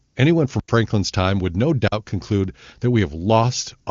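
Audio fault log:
0.07–0.15 s: AMR comfort noise. For about 80 ms the phone judged the line silent and sent no speech frames, so the receiver filled the pause with smooth synthetic hiss. Unlike a dropout, the gap is filled with steady noise at roughly the background level, not true silence.
0.60–0.68 s and 1.88–1.92 s: block of digital silence. The sound drops to silence for 85 ms just before "time would no" and for 43 ms between "time would no" and "conclude that". The lengths fit buffers of 4096 and 2048 samples that were never filled. Each gap has hard edges, and unlike comfort noise there is no hiss inside it.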